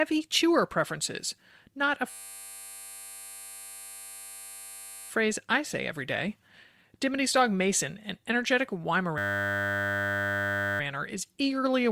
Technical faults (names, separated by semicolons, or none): system hang loop